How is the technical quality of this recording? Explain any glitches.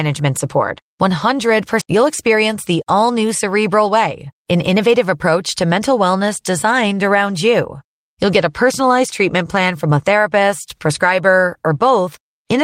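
The recording has two related timing glitches close together near the start. Both point to a network jitter buffer.

At 1.81 to 1.83 s there is a skip ahead. About a second of speech was dropped because later audio was already queued. Playback jumps forward with no gap. The two sides are joined almost directly, so the speech lurches abruptly.

From 1.95 to 3.24 s there is a jitter buffer speed-up. The buffer held more audio than its target, so the receiver trimmed many short pitch-period slices, removing roughly a tenth of a second. Speech runs about 106% of normal speed at unchanged pitch and sounds slightly hurried.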